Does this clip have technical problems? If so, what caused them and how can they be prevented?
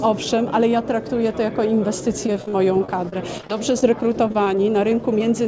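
Yes. Repeated packet loss (robotic sound) runs from 2.27 to 5.21 s: many short holes, none longer than about 28 ms, are each patched by stretching the preceding sound, leaving roughly a tenth of that stretch concealed and giving choppy audio. A steadier network path and a deeper jitter buffer would prevent it.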